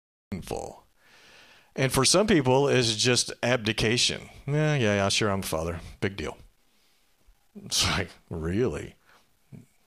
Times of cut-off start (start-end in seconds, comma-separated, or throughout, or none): 0.00-0.32